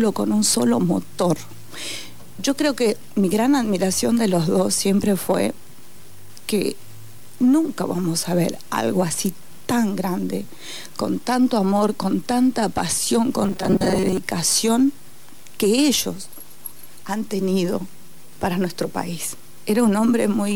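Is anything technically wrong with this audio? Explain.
Yes. Robotic sound from repeated short buffers, 13.43 to 14.17 s: likely starved input, about half replaced by repeats of a roughly 5 ms chunk, imposing a rigid metallic 188 Hz buzz.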